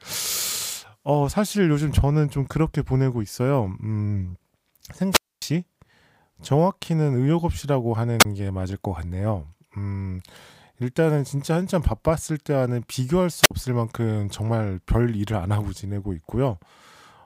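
Wireless microphone squelch dropouts at 5.11–5.42 s, 8.19–8.25 s and 13.41–13.51 s: the radio signal fades, hiss rises, then the receiver mutes for 255, 27 and 52 ms.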